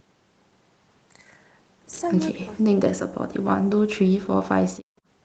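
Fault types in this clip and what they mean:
Speech suppressed in double talk: The echo canceller likely mistook the near talker for loudspeaker echo while both sides spoke, and turned everything down. The speech sinks by around 40 dB, about a second's worth between 2.31 and 3.81 s and again from 4.02 to 4.34 s.
Background gated by the echo canceller: With the loudspeaker playing, the canceller clamped the microphone down hard. The room sound falls away by about 38 dB for roughly 150 ms at 4.8 s, then comes back once the canceller lets go.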